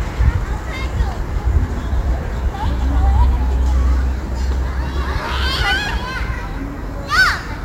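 A recording of everyday sound carries a crude rate conversion from start to finish. The signal was resampled by simply dropping or repeating the nearest sample, with no filtering, which fits a conversion from 48 kHz to 44.1 kHz. The resulting timing jitter leaves an error roughly 30 dB below the signal. It is heard as a gritty, inharmonic fizz riding on louder and brighter moments. On a spectrogram this shows as faint stray lines and haze unrelated to the true partials, strongest beneath high-frequency energy. Zoomed in, the waveform has small irregular steps where samples were skipped.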